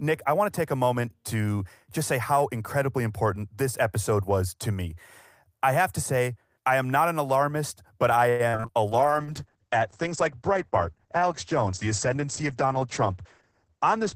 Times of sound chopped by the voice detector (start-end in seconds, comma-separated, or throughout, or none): none